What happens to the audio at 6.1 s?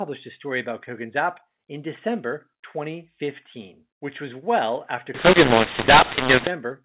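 At 6.1 s the speech turns harsh and distorted, with levels scrambled and pauses filling with noise. This is mu-law and A-law mixed up, running from 5.14 to 6.47 s just after "which was well after": mu-law telephone samples are decoded as A-law.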